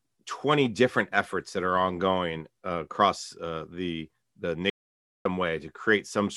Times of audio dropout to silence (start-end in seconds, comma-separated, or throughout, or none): 4.70-5.25